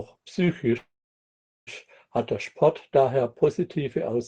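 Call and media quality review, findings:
Call audio freeze, 0.77–1.69 s: brief fading buzz or hiss, then about 0.8 s near-silent gap; speech resumes intact, about 0.9 s late. Likely jitter-buffer underrun. Spectrogram: smeared decay, then blank band.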